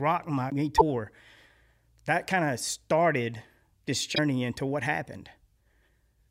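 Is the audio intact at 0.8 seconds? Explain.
No. From 0.77 to 0.82 s the speech is hit by damaged data in a compressed stream. Corrupted bytes make the decoder misread those frames and lose sync while it hunts for the next frame header, producing a brief glitch about 44 ms long.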